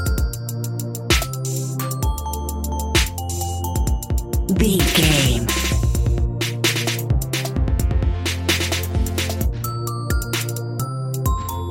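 Nothing goes wrong anywhere in this audio, so there's nothing here to point out.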